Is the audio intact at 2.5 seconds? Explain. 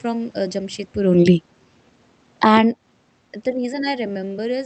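No. At 2.5 seconds the level is being pushed around by the automatic gain control. Automatic gain falling runs from 2.28 to 2.61 s. The control judged the input too loud and pulled its gain down by about 10 dB over that third of a second. The speech sinks, and the room noise sinks with it. That shared drop shows it is the gain stage and not only the talker, who also moves around this moment.

Automatic gain rising follows and overlaps it, from 2.54 to 3.03 s. The input level there falls by about 19 dB, so the control reverses and raises its gain by about 8 dB. Speech and background swell back up together over half a second. The two corrections chasing each other produce a dip and then a rise in loudness right around 2.5 seconds.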